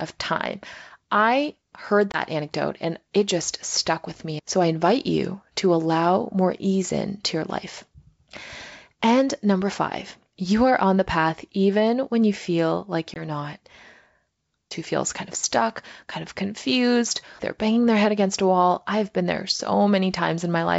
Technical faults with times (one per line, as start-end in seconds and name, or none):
2.12-2.19 packet loss on an ADPCM call
13.14-13.22 packet loss on an ADPCM call